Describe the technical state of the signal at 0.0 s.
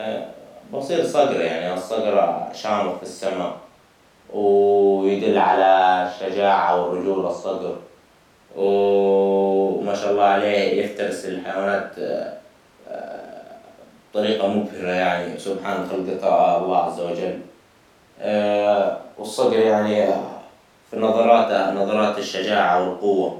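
At 0.0 s the speech signal is intact, with no audible fault at that moment.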